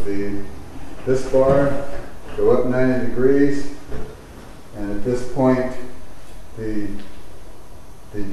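Nothing in the audio stood out as a technical problem on listening.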